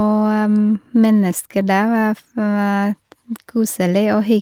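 Listening through this recording of speech, nothing stood out as a technical problem at any point.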